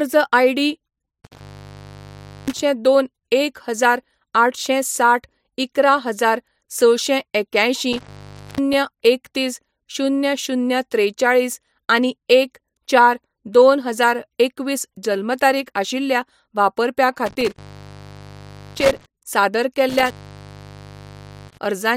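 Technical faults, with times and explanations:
1.24–2.62 s, 7.93–8.73 s, 17.26–19.06 s and 19.89–21.66 s: intermittent contact. A loose cable or plug briefly breaks the connection. The speech drops out for about 1.07 s, 0.49 s, 1.15 s and 1.38 s, with crackle as the contact scrapes open and closed.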